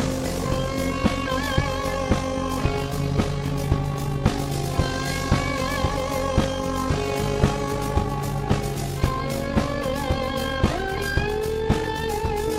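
From start to finish the audio carries overlap-add ripple: a rapid, even flutter that gives the sound a rough, robotic tremolo. The signal was split into windowed frames and rejoined with an overlap whose window gains do not add up to a constant, so the level dips and swells once per frame. The modulation runs at around 50 Hz with a depth of about 6 dB, fast enough to read as buzzy roughness.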